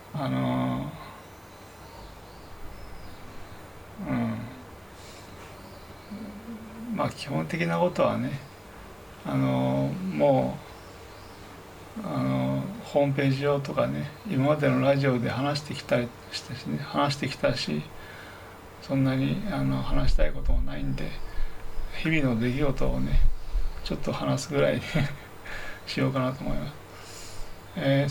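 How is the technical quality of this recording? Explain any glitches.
The recording is marred by one continuous fault, a USB whine running for the whole clip. The USB bus pulls current in 1 ms frames, and that rhythm leaks through power or ground into the audio, producing a steady fixed-pitch tone built on 1 kHz. Its harmonics peak at 17 kHz, giving a thin, high whine that sits roughly 35 dB below the wanted sound.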